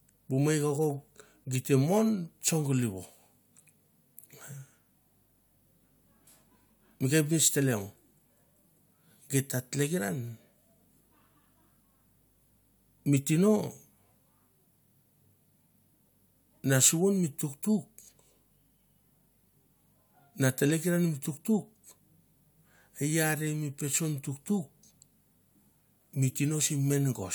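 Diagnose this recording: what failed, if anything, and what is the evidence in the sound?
No failure can be heard anywhere in this recording.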